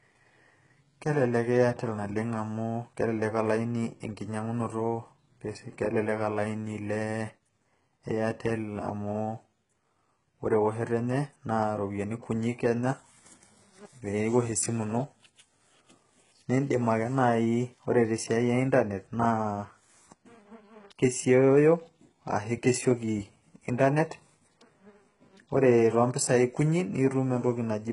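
Throughout the speech, the top end sounds fake. S sounds come out gritty and metallic, and nothing reaches past 11.1 kHz. That's likely HE-AAC compression rebuilding the treble from copied lower bands, and the heavy damage fits a bitrate around 12 kbps.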